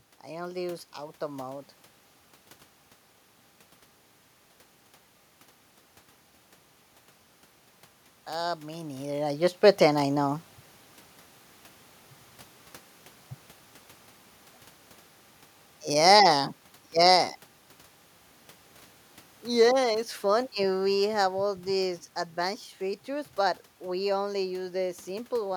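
A speech recording with one technical fault: automatic gain rising between 8.28 and 10.49 s, where the gain control judged the input too quiet and pushed its level up by about 5 dB over roughly two seconds. The voice and the room noise swell together, so the floor lifts along with the speech. On a waveform the envelope widens steadily across that span. On a spectrogram the background band between phrases brightens at the same rate as the speech. The level changes near 9 s and 17 s are the talker moving relative to the microphone, not a system fault.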